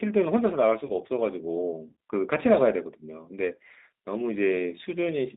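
From start to finish the speech carries G.729 codec damage, plainly audible: a narrow line band of roughly 250 Hz to 3.7 kHz, and a rough, slightly synthetic texture from rebuilding each frame out of a vocal tract filter, pitch predictor and sparse pulses, which fits 8 kbit/s.

At 0.85 to 0.92 s, VoIP packet loss concealed by the speech codec leaves about 40 ms missing, which fits two lost 20 ms packets. The decoder extends its last pitch and filter with falling gain, so the sound is stretched into a fading buzzy tone or coloured noise before normal frames recover.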